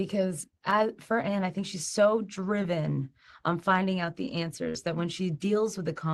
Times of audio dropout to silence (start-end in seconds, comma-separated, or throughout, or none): none